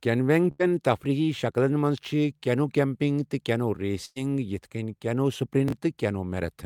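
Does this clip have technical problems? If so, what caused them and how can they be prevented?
Yes. A burst of packet loss hits this speech at 0.51–0.61 s, just before "تفریٖحی شکلن", and at 4.05–4.18 s, right after "کینو کیمپنگ تہٕ کینو". Each time, about 80–100 ms went missing. The receiver stretched out the last sound as a fading buzz or hiss instead of leaving a click or plain silence, and then skipped ahead. A larger jitter buffer or forward error correction on the link would prevent it.

Chunks out of order appear at 5.68–5.72 s. A 20 ms chunk plays one slot late, so the audio jumbles but nothing is missing. Correct sequence-number reordering before playback prevents this.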